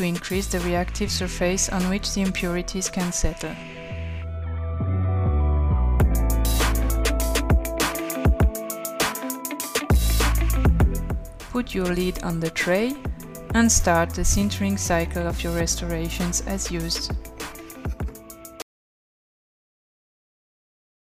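At 18.62 s the sound stops mid-flow and never returns: an audio dropout to silence lasting the final 2.49 s. The gap is pure silence with no room tone or hiss beneath it, which sets it apart from a quiet passage or a gentle fade-out, where some background noise would remain. The likely cause is a lost input, such as a disconnected device or a mute, while recording carried on writing empty samples.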